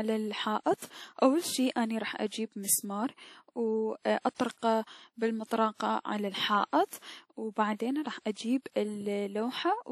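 WMA compression runs throughout: the speech has a ringing, washy quality, with hiss that swells and fades with the signal, and nothing above 15.2 kHz. The likely cause is a low-bitrate transform codec, consistent with a 48 kbps stream, zeroing weaker spectral lines.

Pre-echo appears from 5.46 to 5.51 s, just before "على الحائط و بعدين". About 49 ms of hiss runs ahead of the onset, which sounds softened. The codec spread noise sized for the loud attack across its whole block, filling the quiet moment before it.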